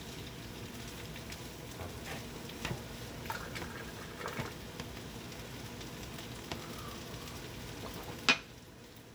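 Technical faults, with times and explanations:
No technical faults detected.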